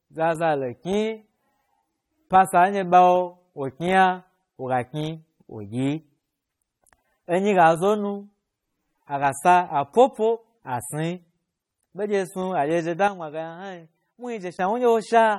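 Across the whole speech clip, plainly audible coding damage points to lossy compression, likely AAC-LC at a low bitrate in the region of 32 kbps. Nothing remains above about 18.6 kHz. The encoder has discarded or roughly substituted spectral detail to meet its bit budget, so the speech sounds dull and smeared, with a warbling, fizzy texture on sibilants and held sounds. A plain low-pass filter would cut the top cleanly without that shifting texture.

From 13.08 s to 14.59 s the level drops by about 8 dB in a single step and then returns just as abruptly. This is a sudden gain jump, likely a digital gain change applied without any ramp. The background noise falls and rises together with the speech, which separates it from a talker simply getting quieter. The lack of any gradual slope also sets it apart from a fade or compressor pumping.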